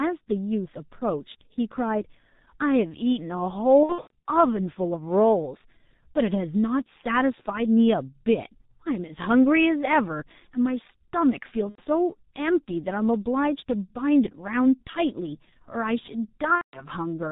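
Throughout the speech, G.723.1 codec damage is heavy. The band stops at 4 kHz, so the voice sounds muffled, and the slow-updating vocal model built on 30 ms frames leaves a hoarse, rough texture with smeared consonants. The coarseness fits the codec's 6.3 kbit/s mode, where the encoder has too few bits to track rapid changes in the voice.

From 3.83 to 4.25 s, VoIP packet loss is concealed by the speech codec. About 270 ms of audio is missing, scattered across a 420 ms stretch, with the longest single gap 90 ms. In each gap the decoder extends the last pitch and filter at falling gain, so the voice stretches out and fades. Recovery is not clean, because each new frame builds on the corrupted state. A shorter drop of 90 ms at 11.69 to 11.82 s gives a brief stretched, fading sound. From 16.55 to 16.87 s, 180 ms is lost, producing another stretched, decaying sound before normal decoding returns.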